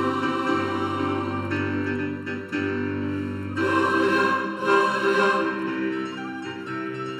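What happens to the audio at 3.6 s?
One channel runs late by under a millisecond and is summed to mono, giving channel delay (comb filtering) throughout; notches from around 700 Hz make the sound hollow and phasey.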